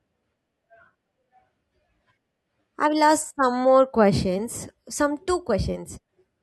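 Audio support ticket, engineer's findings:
No faults found on review of this speech recording; nothing to report for the ticket.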